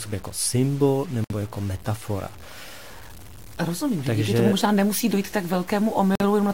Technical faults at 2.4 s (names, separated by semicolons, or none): low bit depth without dither